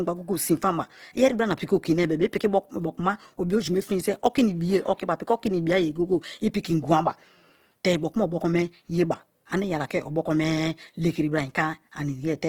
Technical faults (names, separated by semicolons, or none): Opus compression